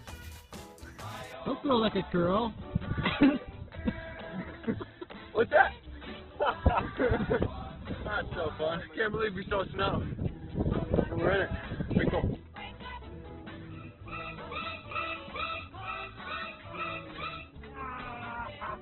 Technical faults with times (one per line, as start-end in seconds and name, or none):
1.33-18.82 adaptive stream at a lower bitrate